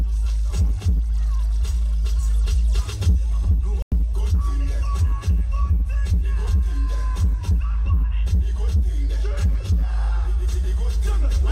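At 3.82 s the audio drops out for about a tenth of a second, until 3.92 s, in a digital broadcast dropout. The receiver stopped getting decodable frames, so it muted. The lost stretch, about 96 ms, fits a few frames failing their checks, and whatever was sent then is gone. On the waveform it shows as a short flat gap, and on a spectrogram as a thin, fully dark vertical band across all frequencies before the signal picks up again.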